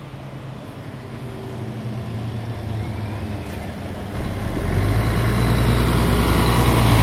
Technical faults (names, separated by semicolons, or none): none